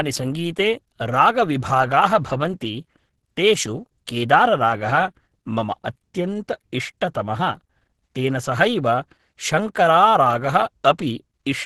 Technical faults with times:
0.00-11.66 Opus compression

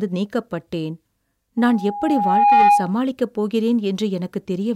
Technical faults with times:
1.57-2.96 loudspeaker feedback squeal

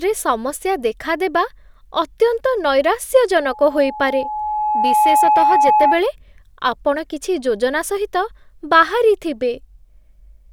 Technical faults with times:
3.41-6.00 loudspeaker feedback squeal

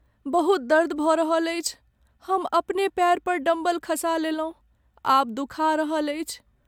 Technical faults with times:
none

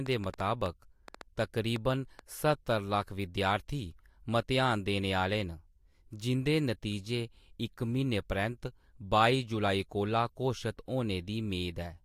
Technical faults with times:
0.06-2.20 train of clicks

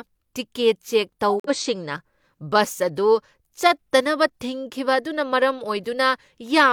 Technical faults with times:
1.29-1.50 corrupt frame muted
2.74-2.80 corrupt frame decoded

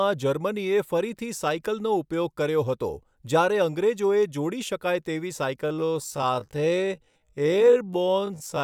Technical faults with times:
5.64-8.64 time-stretched section

